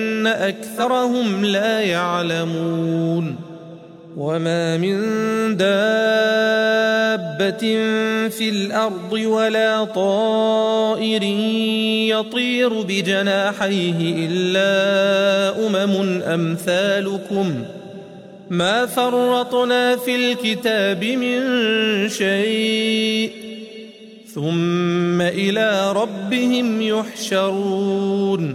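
At 0.75 to 0.85 s the audio jumps forward where compressed frames were skipped. Whole frames were missing or rejected as damaged by the decoder, so around 50 ms of material never plays and the sound lurches ahead. It differs from a plain dropout or buffer glitch: there is no silent gap.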